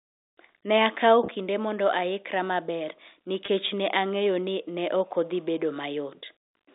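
Packet loss with pitch repetition occurs at 1.26 to 1.28 s, just before "kinde mondo aikra maber", and at 3.46 to 3.48 s, between that phrase and "ne ang'eyo ni ne". Each gap of about 20 ms, which fits a single lost packet, was bridged by repeating the last pitch period, heard as a brief held buzz.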